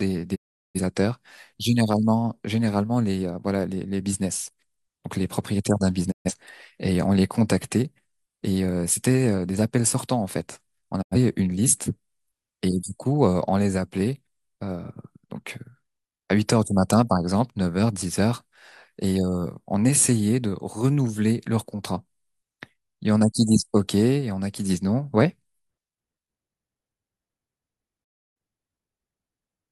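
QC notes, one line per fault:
0.34–0.80 s, 6.10–6.32 s, 11.01–11.16 s, 28.03–28.37 s: digital broadcast dropout. Speech fades out over 20 ms into silence lasting 384, 128, 85 and 299 ms, then resumes mid-programme. The receiver muted on lost or corrupt frames, so that audio is gone.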